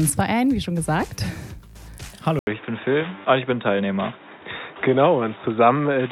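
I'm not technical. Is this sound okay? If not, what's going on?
No. At about 2.39 s the sound briefly drops out for a split second, then continues through to the end noticeably duller and boxier, as if heard through a cheap headset. Nothing above about 3.8 kHz gets through, and a faint new background noise appears, though the loudness stays about the same. This is most likely an input switched to a poorer device: the recording jumped mid-way to a lower-quality microphone that captures a narrower range of sound.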